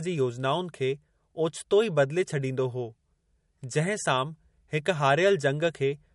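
From start to finish the speech carries audible coding damage, most likely MP3 compression at a low rate, which fits a bitrate near 49 kbps. Nothing survives above about 11.2 kHz, so sibilants lose their top, and the weak detail left below that edge flickers in and out, giving a watery, swirling texture with chirpy s sounds. A simple low-pass filter would dull the treble just as cleanly but leave no swirl.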